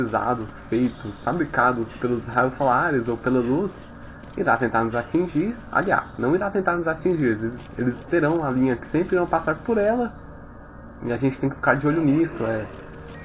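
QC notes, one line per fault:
No fault found.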